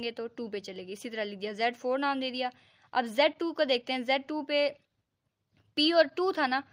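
Nothing here stands out as a technical fault, with no glitches, dropouts or distortion turning up anywhere in the sound.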